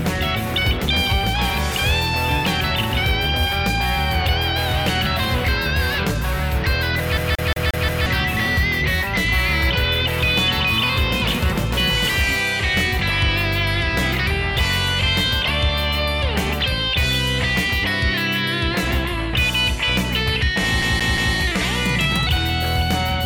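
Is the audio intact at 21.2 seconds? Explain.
No. A CD stuck on one turn runs from 20.82 to 21.35 s, taking in 21.2 s. A scratch keeps knocking the laser back one track at the same point of each rotation, so a 0.18 s slice of sound is replayed three times in a row. Each jump brings a brief mute before the slice restarts, giving the quick, evenly spaced stutter of a skipping disc until play breaks free.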